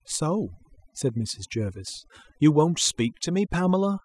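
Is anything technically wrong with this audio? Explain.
Yes. Throughout the speech there is overdone noise removal: a noise reducer set too aggressively pulls individual frequency bands down or out whenever they sit near its noise estimate, taking quieter speech detail with them. The background collapses to near silence with twinkling specks.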